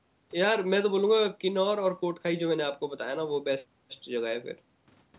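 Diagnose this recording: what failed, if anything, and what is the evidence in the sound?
Nothing failed; no faults heard.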